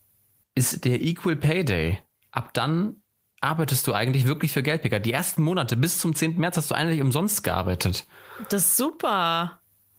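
No technical faults can be heard anywhere in this speech. The Opus voice compression runs in hybrid mode at 24 kbps with the full band kept, and leaves only light coding damage.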